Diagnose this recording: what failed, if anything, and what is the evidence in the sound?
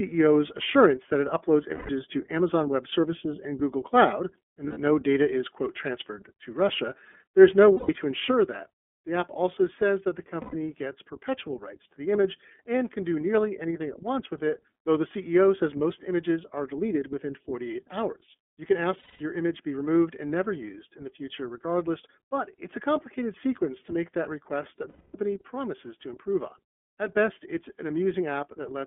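Narrow, slightly rough and synthetic sound with nothing below 200 Hz or above 3.4 kHz throughout. This is the iLBC codec, and its character fits the 13.33 kbps mode with 30 ms frames.

Brief held, buzzy vowel-like sounds, 90 to 240 ms long, occur at 1.74, 4.67, 7.74, 10.41, 18.99 and 24.89 s. These are lost iLBC frames: network packets were dropped, the decoder repeated the last pitch cycle, and the voice is right again almost at once after each gap.

At 8.31 s speech and background drop together by about 6 dB and stay down to the end. This sudden gain jump is likely an unramped digital gain change in call processing.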